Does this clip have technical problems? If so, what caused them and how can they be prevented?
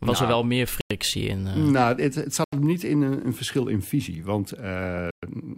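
Yes. There are three Bluetooth stalls, most likely caused by radio interference. It delayed packets on the wireless link, so the headphones' buffer ran empty and playback halted until the retransmitted packets arrived. Each stall is a clean cut to silence, after which the speech resumes: 0.81 to 0.91 s (96 ms), 2.44 to 2.53 s (84 ms), and 5.11 to 5.23 s (120 ms).

Keeping the phone close to the headphones, with a clear line between them and away from busy 2.4 GHz sources such as Wi-Fi routers, prevents these gaps.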